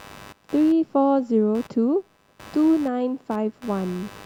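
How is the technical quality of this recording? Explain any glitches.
The recording is compromised by computer activity noise running through the whole speech clip. Shifting processor, graphics or mouse load disturbs the ground the audio circuit shares with the computer, so a buzzy, chirping pulse train, around 100 pulses a second and roughly 25 dB below the speech, rides underneath, tracking machine activity rather than the talking.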